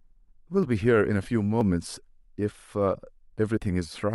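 At 0.63, 1.61, 2.59 and 3.57 s the speech has a tiny skip. This is overlap between stream segments. Adjacent segments claimed overlapping time, so the player discarded a few milliseconds of audio that was never actually duplicated, and the waveform jumps across the gap. The roughly one-second spacing fits segments about 1 s long. The last cut is slightly longer, about 11 ms against 6 ms for the others.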